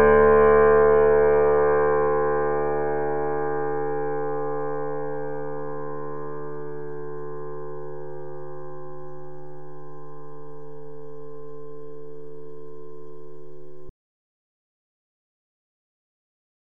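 At 13.89 s the sound stops abruptly, mid-flow, and never returns. This is an audio dropout to silence. The last 2.84 s of the clip are silent. No room tone or background hiss remains underneath. That total blankness sets it apart from a natural pause or a fade. The input signal was likely lost, through a disconnected source, a failed link or an accidental mute, while recording carried on. Whatever sounded after that point is missing.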